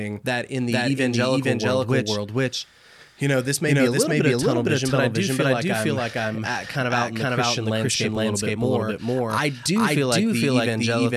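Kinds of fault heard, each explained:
Doubled audio track, throughout the clip: every stretch of speech is heard twice, a full-band copy trailing about half a second behind at roughly equal loudness with no decay or room colour, likely from a second capture through a slower path.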